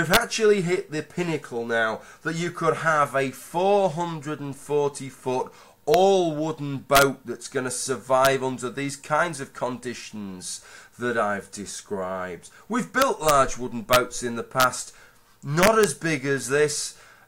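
Integer overflow strikes eight times. The events fall at 0.14 to 0.17 s, 5.94 s, 6.95 to 7.02 s, 8.25 s, 13.02 to 13.31 s, 13.93 to 13.96 s, 14.60 to 14.64 s and 15.63 to 15.84 s. Each happens when a peak pushes past the largest integer value, by about 1 dB at most. Instead of being held at the limit, the sample wraps to the opposite extreme. The result is a violent crack, harsher than clipping, on the loudest moments.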